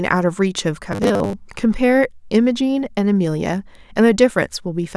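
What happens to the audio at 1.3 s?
At 1.3 s the speech is near the end of robotic sound from repeated short buffers (0.92 to 1.33 s): a rigid 100 Hz metallic buzz, likely from roughly half the audio being replaced by repeated 10 ms buffers.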